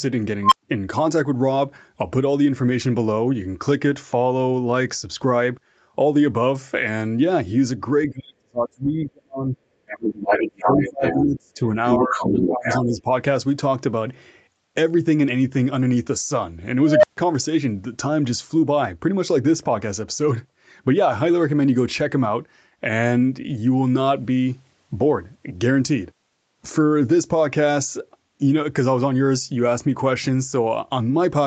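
This speech clip contains two unstable filter bursts. At 0.43 to 0.63 s, a tone near 1 kHz swells over about 88 ms and clips. The output then drops out for about 112 ms before the filter recovers. At 16.82 to 17.17 s, the same thing happens with a lower tone near 700 Hz. It builds for about 212 ms and is followed by roughly 139 ms of silence. Each event is a recursive filter whose coefficients went bad, so its output runs away and overflows. Between 8.09 and 13.08 s, speech is suppressed in double talk three times. The talker's level falls by as much as about 40 dB from 8.09 to 9.58 s, about 25 dB from 10.0 to 11.6 s, and about 15 dB from 11.99 to 13.08 s. In places the speech thins or breaks up. The likely cause is an echo canceller that cannot tell the near talker from loudspeaker echo and turns both down. Over the same stretch, the other side's voice leaks through. A short scrap at 9.87 to 9.99 s sits about 15 dB under the talker. 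Longer passages at 10.23 to 11.23 s and 11.87 to 12.8 s are roughly as loud as the talker. This is likely far-end audio from a loudspeaker that the echo canceller left in the microphone signal.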